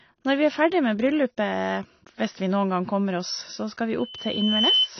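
A speech recording runs with a dull, smeared top end throughout. Nothing reaches above 6 kHz, and there is a plainly audible warbling texture, likely from AAC compression at a low bitrate, something near 24 kbps. On a spectrogram this appears as a hard ceiling at 6 kHz. From 3.99 s to 4.90 s a loudspeaker feedback squeal rises at 3 kHz as the microphone picks up its own loudspeaker and the loop gain passes one. The tone swells over roughly 0.7 s to sit around 5 dB above the speech. It shows as a bright horizontal line on a spectrogram and as a growing, regular envelope on the waveform.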